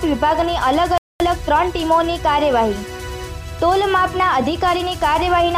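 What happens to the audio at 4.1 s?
Nothing goes wrong at 4.1 s; the audio plays through that moment intact, with no dropout, click or other fault.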